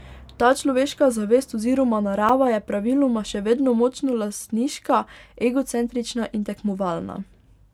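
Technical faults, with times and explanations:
throughout generation loss. The speech sounds swirly, smeared and hollow, with blurred attacks. Likely repeated MP3 encoding, about three passes near 130 kbit/s, stacking fresh quantisation noise.
2.29 s block of digital silence. After "človeška zavest oziroma", a 5.3 ms dropout cuts in and out without fade, heard as a tick or dip. The gap fits a 256-sample buffer left unfilled.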